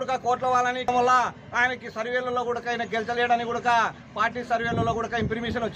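No technical faults can be heard anywhere in the audio.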